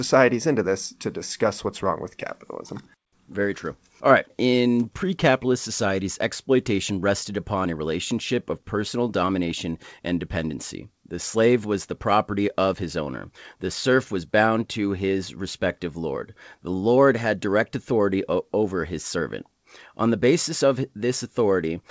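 Clock drift between sender and receiver runs through the whole speech clip. The sender's clock is about 5 percent fast, so audio arrives quicker than the receiver plays it and the jitter buffer keeps filling. Unlike packet loss, nothing drops out into silence; timing simply slips steadily forward.

Repeated timing corrections follow from that drift, from 0.16 s to 21.79 s. To hold the buffer in check, the receiver keeps trimming short slivers, giving an effective rate of 105 percent. Every edit shortens rather than repeats, and they land at uneven intervals. Each edit is small, rather than one uniform speed-up or pitch shift. Through the G.722 call path, nothing is heard above 8 kHz.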